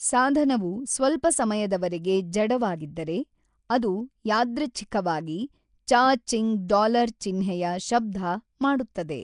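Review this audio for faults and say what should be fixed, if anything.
Nellymoser compression runs through the whole clip: rough, hissy, underwater-sounding speech with nothing above 10.6 kHz. It is likely a fixed two-bit-per-sample block codec, consistent with roughly 44 kbps. Record or transmit with a modern codec such as Opus, or keep the uncompressed source.

Pre-echo at 3.69 s, between "ಸಾಧನವು ಸ್ವಲ್ಪ ಸಮಯದವರೆಗೆ ಜಡವಾಗಿದ್ದರೆ" and "ಅದು ಯಾದೃಚ್ಛಿಕವಾಗಿ", puts a 12 ms hiss before the attack because block-wide quantisation noise fills the quiet gap. A codec with short-block switching for transients prevents this.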